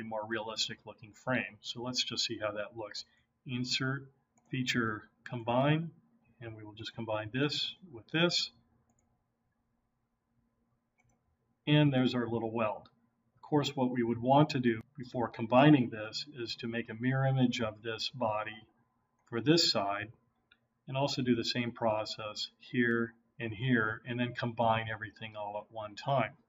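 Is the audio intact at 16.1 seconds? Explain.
Yes, at 16.1 seconds the audio runs on cleanly with no dropout, click, distortion or other break in the sound.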